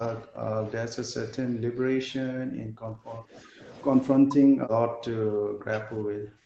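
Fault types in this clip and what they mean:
Speech suppressed in double talk: the speech drops by roughly 40 dB and breaks up in pieces, likely because an echo canceller clamped down during simultaneous talk from both ends.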